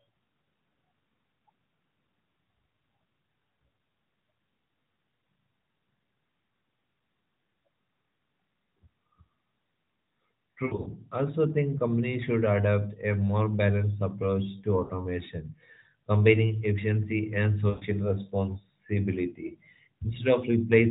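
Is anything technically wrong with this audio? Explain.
Yes, there are lost AMR speech frames at three points. The first runs from 10.66 to 10.89 s, just before "also think companies should". The second runs from 14.84 to 14.92 s. The third runs from 17.70 to 17.85 s, right after "combining efficiency and". Frames failed their checksum, so the AMR decoder kept repeating the last good pitch and vocal tract settings at falling gain. You hear brief smeared, fading warbles, broken up in the first gap, before the speech returns weak or rough for a moment.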